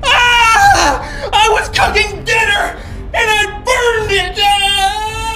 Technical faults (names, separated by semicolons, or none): channel delay (comb filtering)